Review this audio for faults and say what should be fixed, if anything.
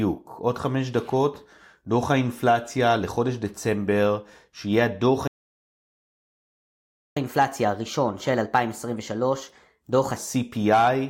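A playback stall cuts the speech off mid-flow at 5.27 s, leaving about 1.89 s of silence until 7.17 s. Unlike a dropout, which deletes audio, the speech resumes where it stopped, so nothing is lost. The cause is likely a player that ran out of buffered data or had its thread blocked.

Catch-up at higher speed follows from 7.17 s to 10.17 s. The backlog plays 1.15 times faster and the pitch rises about two semitones. A time-stretching catch-up would keep the pitch steady. Here speed and pitch move together, which shows the player is simply resampling to win back the lost time.

To prevent both, give the player a deeper buffer and keep its audio thread from being blocked, and if catch-up is still needed, use pitch-preserving time-stretching instead of plain resampling.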